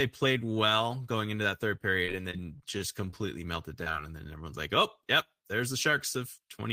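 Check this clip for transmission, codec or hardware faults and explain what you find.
The clip, which is speech, has two transmission faults, both from lost packets.

From 2.05 to 3.30 s, just after "going into that third", the sound turns choppy and robotic, with pieces missing. This is repeated packet loss: eight gaps, the longest 24 ms, each patched by extending the preceding sound, so about 11% of the stretch is filled-in audio.

At 3.84 to 3.88 s there is a brief smear or wobble. This is short concealed packet loss: about 20 ms never arrived in time, and the receiver continued the previous sound to cover the hole before blending back into the real audio.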